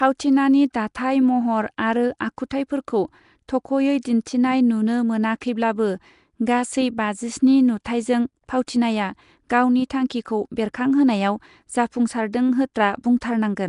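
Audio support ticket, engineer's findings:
Rough hissy halo and smeared, underwater speech across the whole clip, nothing above 10.6 kHz; likely Nellymoser compression, noise-filled empty bands, fits a 44 kbps stream.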